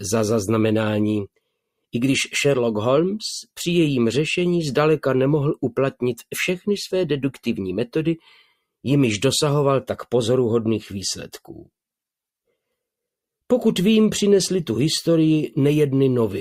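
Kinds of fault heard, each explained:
Sound cut by the noise suppressor: the suppressor mistook sound for noise and pulled it down about 13 dB for roughly 0.3 s, a visible energy dip on spectrogram and waveform.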